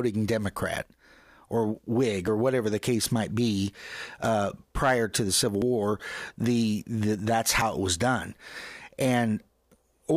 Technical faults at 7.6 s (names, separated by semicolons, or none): dropped buffer (overrun)